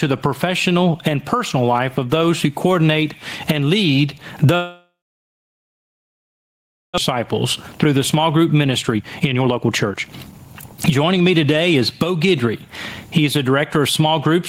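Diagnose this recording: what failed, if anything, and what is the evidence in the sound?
Gain pumping throughout: the gain swings by about 20 dB, ducking under loud syllables, likely a fast limiter fighting excessive mic gain.

Long network dropout from 4.55 to 7.00 s: a brief fading fill, then about 2 s of silence. Roughly 1.6 s of speech is likely lost on the network.

Jitter buffer speed-up from 7.15 to 11.81 s: the speech runs at 116% speed with unchanged pitch as the buffer trims about 0.7 s of backlog.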